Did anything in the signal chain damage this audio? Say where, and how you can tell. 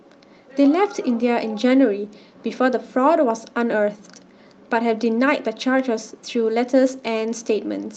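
No, nothing in the chain damaged this speech; it went through a WebRTC call path whose Opus codec band-limits it to about 8 kHz with its normal coding noise, which is expected behaviour for that stage.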